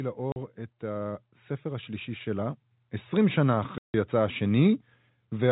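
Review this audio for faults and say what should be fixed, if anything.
Automatic gain rising, 0.16 to 3.43 s: the gain control judged the input too quiet and lifted it about 8 dB, so speech and background swell together.

Packet loss filled with silence, 0.32 to 0.36 s (40 ms) and 3.78 to 3.94 s (160 ms): missing packets were replaced by silence, leaving hard-edged holes whose lengths fit 20 ms packets.

To prevent these, set a steady input level so the gain control need not ramp, and add jitter buffering with packet loss concealment instead of inserting silence.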